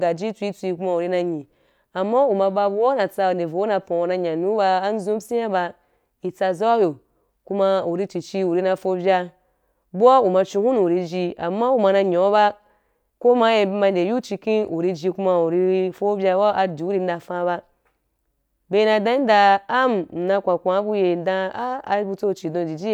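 No technical faults can be heard anywhere in the recording, which stays intact and continuous throughout.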